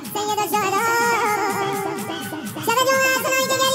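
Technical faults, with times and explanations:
Throughout, audio read two samples at a time (double speed): the playback side is taking each pair of consecutive samples as a single frame, most likely because it expects two interleaved channels or a sample width twice the real one. Each second of playback therefore consumes two seconds of material, so everything runs at 2.0 times normal speed and sits a full octave high.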